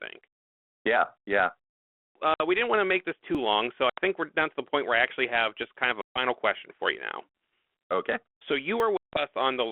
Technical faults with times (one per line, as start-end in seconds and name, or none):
2.34-2.41 packet loss on an ADPCM call
3.35 dropped buffer (overrun)
3.90-3.99 packet loss on an ADPCM call
6.01-6.19 packet loss on an ADPCM call
8.80 dropped buffer (overrun)
8.97-9.24 packet loss on an ADPCM call